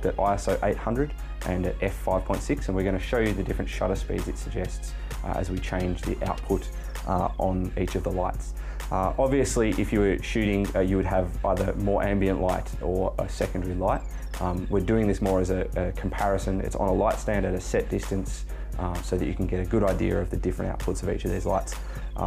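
From start to finish, mains hum sits under the sound: a steady 50 Hz tone, loud and only a little below the sound itself, picked up from the power line through a ground loop or nearby transformer. Its fixed pitch separates it from broadband rumble or wind noise.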